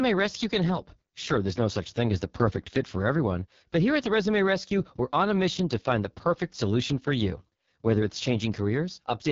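Throughout, the speech carries heavy AMR wideband (HD Voice) codec damage. It sounds rough and raspy, fitting its lowest bitrate. Nothing is heard above 7.4 kHz.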